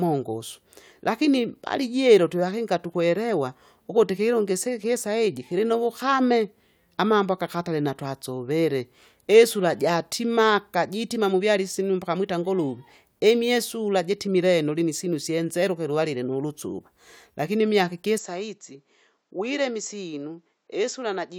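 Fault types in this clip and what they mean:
Input switched to a poorer device: At 18.18 s the speech suddenly loses its top end and stays that way to the end. Nothing is heard above 7.6 kHz from that point. The level drops by about 5 dB. A faint new background noise appears, roughly 50 dB below the speech. There is no gap at the change. The likely cause is the recording input moving to a lower-quality microphone with a narrower band and its own tone.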